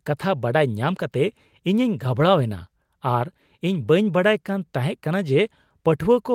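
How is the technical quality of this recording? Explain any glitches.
The technical quality of this recording is sound, with no glitches to explain.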